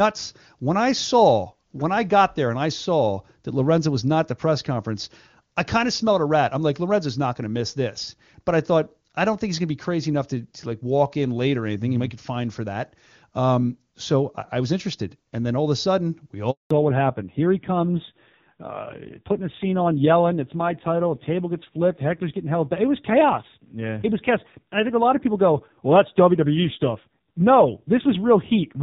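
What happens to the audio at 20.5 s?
At 20.5 s the speech is in a fallback to narrowband. The drop begins at 16.71 s and lasts to the end of the clip. Before it, the call runs in HD Voice, where AMR-WB sounds clean. Then the link switches to an older narrowband codec that cannot carry anything above 4 kHz. The top of the spectrum is gone. The speech turns dull and muffled, with a rough, grainy edge that fits a very low rate near 5.9 kbit/s.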